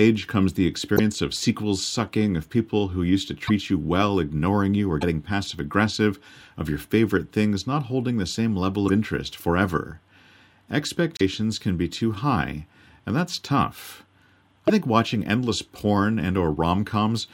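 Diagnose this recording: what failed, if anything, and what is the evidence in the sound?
The codec stage failed, likely a broken MP3 bit reservoir. The speech jumps ahead with a brief glitch at 0.96–1.00 s, 3.46–3.51 s (between "people who used to" and "you well ignoring you"), 5.00–5.03 s, 8.87–8.90 s (between "holding the same level" and "interest forever"), 11.17–11.21 s and 14.67–14.70 s (before "think watching endless"). Each lasts 28 to 44 ms, about one or two 26 ms frames. Frames were lost. The next frame reached back for borrowed bits and decoded another frame's bytes.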